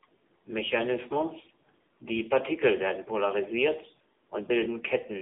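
Throughout, the speech sounds thin, buzzy and synthetic, with nothing above 3.7 kHz: AMR narrowband mobile codec damage, consistent with a rate near 8 kbps.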